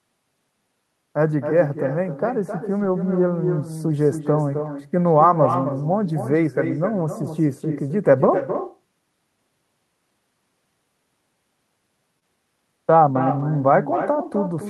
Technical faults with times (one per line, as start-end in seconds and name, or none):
0.00-14.70 echo with no canceller
2.79-2.85 lost packet rebuilt from error correction
4.65 lost packet rebuilt from error correction
12.19-12.23 short concealed packet loss
13.39 lost packet rebuilt from error correction